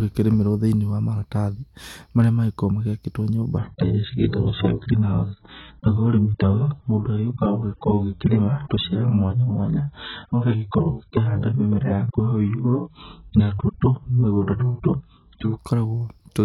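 From 3.58 s to 15.58 s the speech abruptly turns dull and smeary, with nothing above 4.2 kHz: an adaptive stream dropping to a much lower bitrate, roughly 8 kbit/s.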